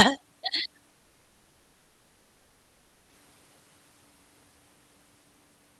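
Speech, with a long network dropout from 0.89 to 3.13 s, likely caused by lost packets: the sound smears into a fading buzz, then only a faint, flat noise floor appears on the spectrogram, and speech resumes with that section missing.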